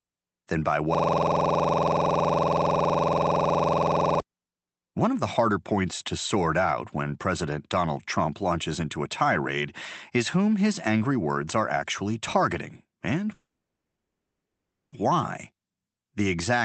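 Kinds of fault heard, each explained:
System hang loop: Right after "than by", from 0.95 to 4.20 s, one 46 ms slice of audio repeats about 70 times at 21.5 Hz, giving a rough, rapid buzz. The driver froze while the hardware kept replaying a ring buffer, which fits a 2048-sample buffer.
Call audio freeze: After "are actually targeting and", from 13.33 to 14.94 s, the sound briefly carries on, then drops to near silence for about 1.5 s before resuming where it stopped, with nothing lost. This is likely stalled packets draining the jitter buffer.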